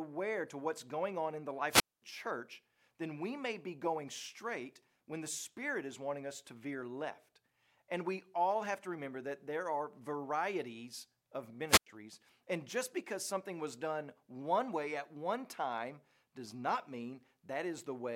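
At 1.69 to 2.02 s, after "going on in the" and before "church then we may", and again at 11.68 to 11.87 s, the speech hits a wireless microphone squelch dropout. The radio link fades, hiss swells, then the receiver mutes for 0.22 s and 0.09 s. That static rise before the hole sets it apart from a clean digital gap.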